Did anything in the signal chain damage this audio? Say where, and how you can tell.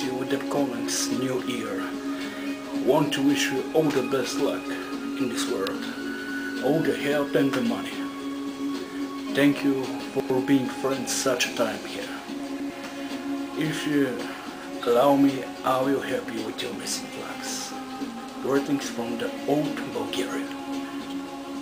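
Yes. Chunks out of order, at the buffer or delivery stage, at 10.0 to 10.3 s and 12.4 to 12.7 s. Each time a 100 ms block plays two blocks late. Nothing goes missing, but the sound jumbles briefly. There are three hard joins in each spot.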